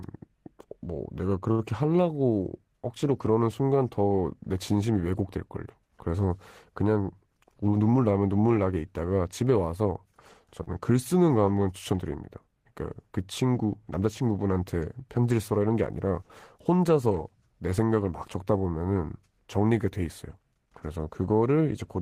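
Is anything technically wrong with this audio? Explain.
Yes. The speech has two kinds of network playback fault.

Short stalls from a late packet occur at 1.51 to 1.62 s and at 10.63 to 10.70 s. In each case a packet was not there when it was due, so the jitter buffer ran dry. The receiver stretched the last sound to fill the gap, 71 ms the first time and 36 ms the second. It then resumed from the same point, so nothing is lost but delay grows by those amounts. Each stall sounds like a briefly held sound with a faint buzzy or dipping quality.

A jitter buffer speed-up runs from 7.62 to 8.05 s. Too much audio had built up in the buffer, so the receiver trimmed short pitch-period pieces repeatedly, about 70 ms in total. That passage plays at roughly 115 percent speed with unchanged pitch and sounds hurried.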